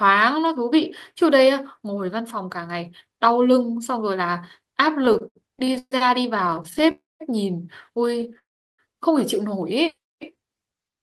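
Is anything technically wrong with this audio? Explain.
Yes, the speech has three kinds of timing fault.

Repeated stalls (stutter) occur at 5.05 to 5.93 s, 6.37 to 6.89 s and 8.14 to 8.37 s. Packets arrived late, so the buffer kept running dry and the last sound was stretched to cover each wait. The first burst has nine gaps up to 130 ms, about a third of its span. The others are shorter, with gaps up to 13 ms, and sound like a fluttering catch.

Call audio freezes occur at 6.91 to 7.22 s and 8.39 to 8.80 s. The sound holds as a brief fading buzz or hiss, then goes silent for about 0.19 s and 0.36 s, before resuming where it stopped. These pauses add 0.29 s and 0.40 s. They are likely caused by packets held up in transit.

A jitter buffer slow-down runs from 9.95 to 10.41 s. The receiver repeated single pitch periods or bits of pauses to rebuild its reserve, adding 60 ms. Speech plays at about 89% speed there, drawn out but at unchanged pitch.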